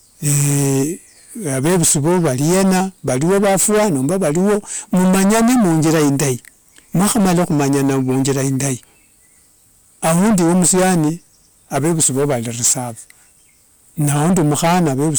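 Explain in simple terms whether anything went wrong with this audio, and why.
Something did go wrong here, and it lasts the whole clip: hard clipping. The speech was pushed far louder than the recording chain could handle, so the tops of the waveform got sliced off flat. Roughly a fifth of the audio is hitting that ceiling. Those chopped-off peaks add gritty high-pitched junk, which is why every loud moment sounds harsh and fuzzy rather than clean.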